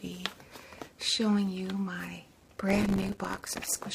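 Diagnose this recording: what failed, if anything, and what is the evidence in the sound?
Processor overload crackle at the driver and buffer stage, from 2.41 to 3.85 s. A gritty tearing rides on the sound as many buffers of a few milliseconds each miss their deadline and drop to silence. The waveform shows dense, hard-edged gaps, and the spectrogram shows broadband vertical streaks.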